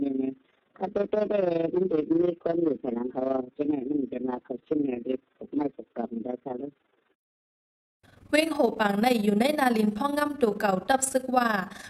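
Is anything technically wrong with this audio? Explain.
Yes. Throughout, a rough flutter pulses around 20 times a second, about 11 dB deep: overlap-add ripple, from framed audio rejoined with overlaps that don't sum evenly.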